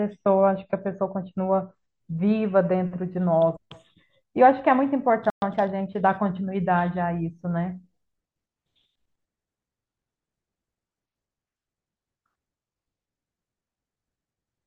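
An adaptive stream starting at a low bitrate covers 0 to 2.0 s. The player opened on a lean encoding to start quickly, which fits roughly 32 kbit/s MP3. Nothing sounds above about 8.1 kHz, so the speech is dull and smeared by codec artefacts. At 2.0 s it jumps cleanly to a fuller version, consistent with 128 kbit/s, with no gap.

A playback stall hits at 5.3 s. The output drops to silence for 120 ms mid-flow, likely because the player's buffer ran dry or its thread was blocked. The speech then resumes.

Time-compressed catch-up follows from 5.42 to 6.22 s. The player trims its backlog by cutting and cross-fading short slices, so the speech runs about 1.15 times faster at unchanged pitch, sounding rushed.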